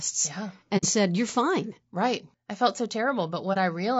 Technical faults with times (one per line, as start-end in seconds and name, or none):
0.00-3.99 low-delay AAC compression
0.77-0.84 AAC frame loss with muting
3.53-3.57 AAC frame loss with muting